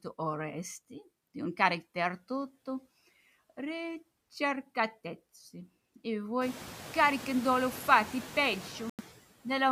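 From start to finish the speech runs through a noise suppressor, and its artifacts are present throughout. The processor pulls down the bands it judges to be steady noise by about 13 dB, so the background sinks in the pauses and swells back under each phrase. Unlike a simple gate, which opens and shuts the whole signal, this works band by band. After about 6.5 s the room noise rises by about 17 dB and ends up about 18 dB below the speech.

From 8.90 to 9.01 s the sound cuts out completely and comes back as if it had kept playing underneath. This is most likely a Bluetooth dropout, where audio packets arrived too late for the headphones and were discarded, losing roughly 90 ms of audio. The suppressor only lowers the noise floor while speech carries on. Here, by contrast, everything falls to silence and then resumes mid-stream rather than picking up where it stopped.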